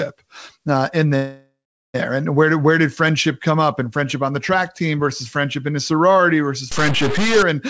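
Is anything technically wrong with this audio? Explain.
Yes, there are two faults.

A call audio freeze runs from 1.16 to 1.96 s, right after "uh in" and before "and where did where". Incoming packets were likely held up in transit, so the jitter buffer ran dry and the receiver stretched the last sound into a fading buzz or hiss that turns silent for about 0.42 s. When the packets arrived, playback resumed where it had stopped. The 0.78 s gap is inserted rather than taken out, so nothing is lost but everything after it is delayed.

A stuck bit distorts the sound from 6.72 to 7.43 s, following "in a sorority versus". The likely cause is one bit of each sample being held at a fixed value, so roughly half the samples are wrong by that bit's weight in a pattern that follows the waveform. The result is grainy noise or buzzy distortion over the sound. Quieter moments fill with noise because that bit changes with the sign of small values. 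The band-limiting to nothing above 8 kHz is consistent with a G.722 call path.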